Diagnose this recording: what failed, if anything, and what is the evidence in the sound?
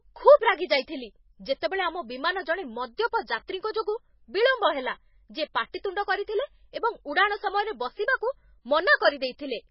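The codec stage is at fault for the whole clip, most likely heavy MP3 compression. Nothing is heard above 5.6 kHz, and the speech has a watery, swirling quality as faint spectral detail flickers in and out between frames, with sibilants turning chirpy and consonant onsets smeared. That combination points to a very low bitrate, around 19 kbps. A plain low-pass filter or narrowband channel would remove the treble cleanly, without the warbling instability underneath.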